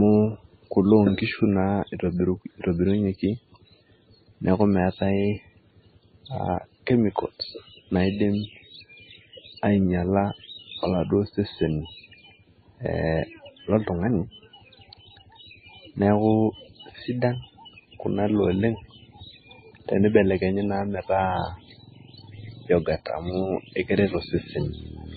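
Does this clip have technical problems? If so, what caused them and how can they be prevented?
Yes. Throughout the speech, nothing is heard above 4.6 kHz, and the sound is watery and swirly, with chirpy, smeared sibilants. This is likely heavy MP3 compression. The damage points to a very low bitrate, around 17 kbps. Prevent it by encoding at a much higher bitrate.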